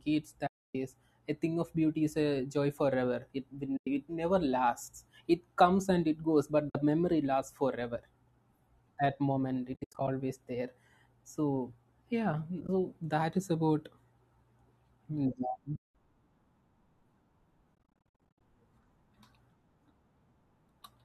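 AAC frame loss with muting leaves soft-edged gaps at 0.47–0.75 s before "a thing of", 3.77–3.87, 6.70–6.75, 9.74–10.08 s between "that moment" and "there so", 12.61–12.69 s before "that is about", 15.76–15.95 and 17.75–18.40 s. The decoder zeroed lost frames, so the sound fades out and back in. The stretches at 9.74–10.08, 12.61–12.69 and 17.75–18.40 s are choppy strings of short dropouts rather than one solid hole. A touch of graininess likely comes from low-delay AAC coding at 64 kbps.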